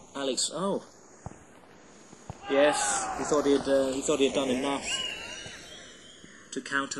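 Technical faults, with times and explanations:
throughout, channels drifting apart: a slow flanging sweep, because the channels run on clocks about 150 ppm apart and their offset creeps toward a millisecond.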